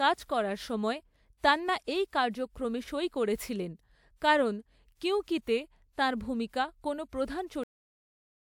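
At 7.63 s the speech stops dead in the middle of a sound, and the remaining 0.82 s is digital silence: a cut-off end. The final buffers of audio were never written or played, so the recording was truncated before the talker finished. A natural ending or fade-out would let the sound decay. Here there is no tail at all, and unlike a mid-clip dropout, nothing resumes afterwards.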